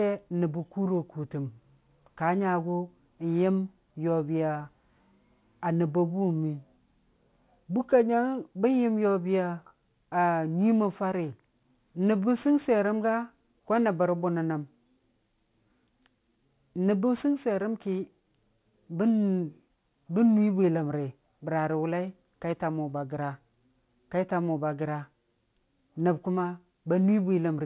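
Speech, with aliasing throughout. The sibilants sound gritty and metallic. Energy runs hard up to 4 kHz, which fits a resample to 8 kHz with no anti-alias filter. Content above 4 kHz folds back as wrong pitches, roughly 35 dB below the speech.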